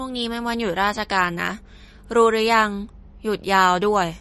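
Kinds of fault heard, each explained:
MP3 compression: The speech carries plainly audible codec damage throughout, with a watery, unsteady texture, and nothing is present above 12.1 kHz, so the top of the treble is missing. This is likely MP3 encoding at a low bitrate, consistent with around 40 kbps. Short of bits, the encoder drops everything above a fixed cut-off and zeroes quieter frequency lines, which then flicker on and off between frames.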